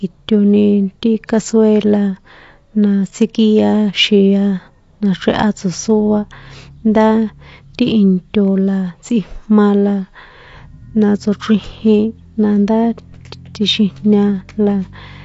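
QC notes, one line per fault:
Throughout: AAC compression, likely at a low bitrate near 32 kbps; nothing above 7.6 kHz, with swirly, warbling sibilants that a plain low-pass filter wouldn't add.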